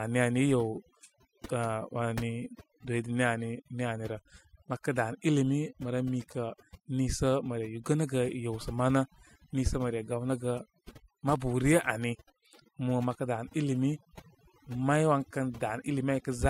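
From start to finish, the speech carries overdone noise removal. A noise reducer was pushed far too hard. It cuts individual frequency bands down or off whenever they sit near its idea of the noise floor. Quieter parts of the voice fall below that line and vanish with the noise. The gaps between phrases drop to near silence, dotted with twinkling specks.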